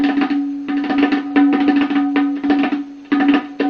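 At about 1.27 s there's a short stall from a late packet, running to roughly 1.34 s. A packet showed up late, the jitter buffer ran dry, and the receiver held the last bit of sound for around 32 ms until the data caught up. Nothing actually goes missing; playback just picks up where it left off, now 32 ms behind. What you hear is a brief smeared hang with a faint buzzy dip before things move on.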